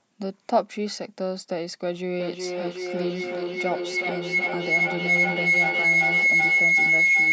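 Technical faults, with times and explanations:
2.19–7.32 s, feedback howl: a tone near 2 kHz rises out of the speech and keeps building to the end, peaking about 9 dB above the speech, with the loop repeating roughly every 400 ms. Two devices on the same call share a room, so sound leaving one loudspeaker re-enters the other microphone and loops back louder each pass. The loop favours a narrow band around 2 kHz, and its round-trip delay sets the repeat rate.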